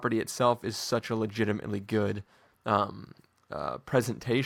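Nothing goes wrong in this speech recording; there's simply no technical fault to point to anywhere along it.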